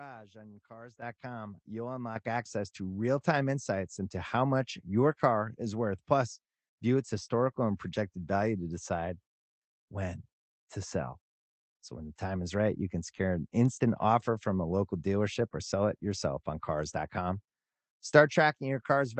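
At 1.02 s the microphone volume is stepped up, with everything jumping about 10 dB louder at once. At 2.16 s a second step adds about 8 dB, just before "access to real time". The call software raised the device's input gain in two steps, so the speech and the background noise rise together. On a waveform the envelope widens abruptly at both points. On a spectrogram every band brightens at once, up to the ceiling near 8 kHz left by the call codec.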